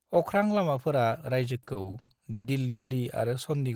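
From 1.63 to 2.47 s the speech drags in repeated stalls, a stutter. Six times the flow halts and the last sound is held on until it can resume. The fills add up to 330 ms, and the longest lasts 120 ms. About 39% of this stretch is filler, yet none of the speech is lost. Packets were reaching the receiver slower than playback, so its jitter buffer kept running dry.

At 2.68 s a call audio freeze begins and lasts until 2.93 s. The final sound stretches into a buzz or hiss that fades, ending in about 30 ms of silence. In all, 220 ms is filled, and the speech then carries on from where it stopped. Nothing is missing, but everything after it is pushed 220 ms later. A burst of packets was likely held up in transit, emptying the buffer.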